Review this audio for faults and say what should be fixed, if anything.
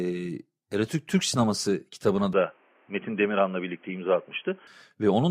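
From 2.33 s to 4.67 s the speech turns dull and boxy, losing everything above 3.3 kHz, then opens back up; both changes are instant, with no gap and no jump in loudness. A faint new background noise, roughly 35 dB below the voice, appears with it. This is likely an input switched to a poorer device, such as a headset's narrowband call profile, which passes less bandwidth and brings its own noise. Locking the recording to one chosen input device, and disabling automatic switching, would prevent it.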